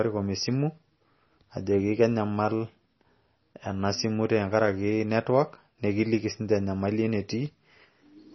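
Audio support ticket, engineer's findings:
Treble missing throughout the speech, nothing above 5.9 kHz. Watery, swirly texture. Metallic chirps on s sounds. Likely MP3 compression, heavy. Bit-starved encoder lowpassed the band and dropped weak lines frame to frame. Fits a very low bitrate, around 24 kbps.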